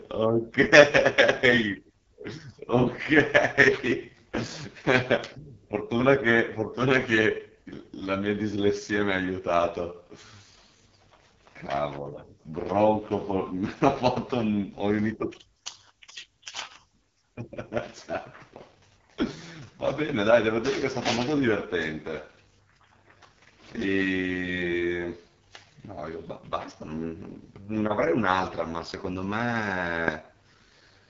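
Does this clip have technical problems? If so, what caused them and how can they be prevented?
Yes. The speech runs through the AMR wideband (HD Voice) codec at its lowest rate, 6.6 kbit/s. The sparse pulse model leaves it rough and raspy throughout. Nothing sits above 7.2 kHz. Prevent this by using 12.65 kbit/s or higher.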